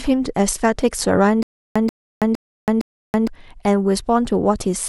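A speech clip with stutter with silent gaps from 1.43 to 3.27 s: a 135 ms burst of sound plays, then about 327 ms of dead silence, repeating four times on a steady 461 ms cycle. This likely comes from a stalled player or stream replaying its last fragment at each retry and then running dry. The sound that belonged in those gaps is lost. On a waveform the bursts look identical. On a spectrogram, copies of the same pattern sit between fully blank columns.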